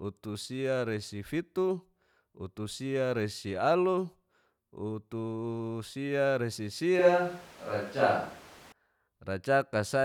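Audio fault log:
6.99–8.72 s, switch to a distant microphone: the speech abruptly turns hollow and roomy, with thinner bass and room noise about 25 dB below it, at much the same level, then snaps back. The close microphone likely dropped out, leaving a farther one.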